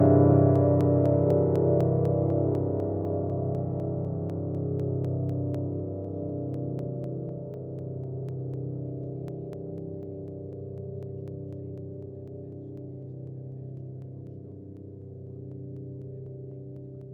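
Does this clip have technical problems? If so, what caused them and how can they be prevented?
Yes: regular ticks every 0.25 s from 0.06 to 17.01 s, periodic USB or driver dropouts where sub-millisecond slices are skipped when something blocks the bus. Prevent them by disabling the background task that polls the USB bus and using a larger audio buffer.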